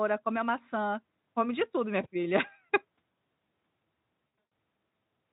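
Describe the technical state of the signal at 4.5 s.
At 4.45 s there is VoIP packet loss concealed by the speech codec. About 200 ms of audio is missing across a 240 ms stretch, the longest gap 120 ms. The decoder extends its last pitch and filter with falling gain, so speech smears into a fading buzz or coloured noise. The Speex coding around it shows faint or no damage.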